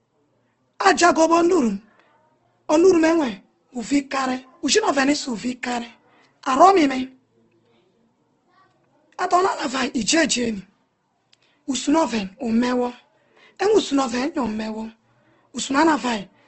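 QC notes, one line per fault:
throughout: Opus compression. Nothing is heard above about 8.2 kHz, so the top of the speech is cut off and sounds closed in. The damage is plainly audible. Tones come out rough and grainy, with a noisy texture where detail should be. The likely cause is Opus in its CELT music mode at a low rate, which fits about 16 kbps. When bits run short it refills bands with folded or noise content instead of leaving them empty.
10.46, 14.46: gap between chunks. At each time the sound stops dead for about 7 ms and then resumes. The two breaks are 4 s apart, which points to audio handled in 4 s chunks. Nothing is lost; silence is inserted at each join, as happens with codec padding or a player that starts each chunk late.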